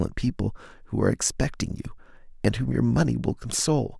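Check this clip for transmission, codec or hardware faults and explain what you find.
Listening through the speech, nothing stands out as a technical fault. There is nothing in the recording that calls for a closer look.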